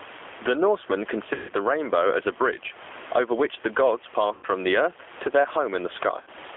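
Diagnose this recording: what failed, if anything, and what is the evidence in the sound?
Gain pumping at the call-processing stage: the room noise sits about 32 dB below the speech, and the gain swings by about 15 dB. The waveform envelope looks flattened, likely from excessive input gain driving a fast limiter.

G.729 codec damage is plainly audible throughout: rough, synthetic speech band-limited to 300 Hz to 3.5 kHz. The spectrogram shows nothing above 3.5 kHz, which fits an 8 kbit/s G.729A stream.

VoIP packet loss concealed by the speech codec at the network stage, at 1.34–1.53 s, 4.34–4.46 s and 6.21–6.29 s (150, 90 and 60 ms lost). The decoder extrapolates from its last pitch and filter with falling gain, which appears as a decaying envelope.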